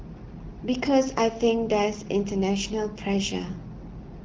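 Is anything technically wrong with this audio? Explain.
No, nothing is technically wrong with this audio.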